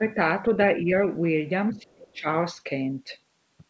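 From 0.80 to 0.86 s the speech dips slightly, and from 1.71 to 2.27 s it is cut deeply, nearly gone. The likely cause is speech suppressed in double talk: the echo canceller, unable to separate near-end speech from echo, attenuated both.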